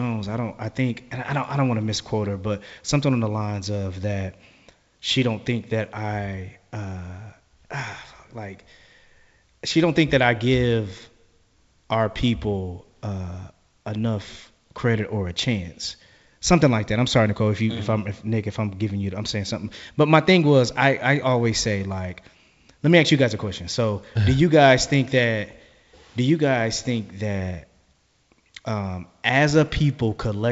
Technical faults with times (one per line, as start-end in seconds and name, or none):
none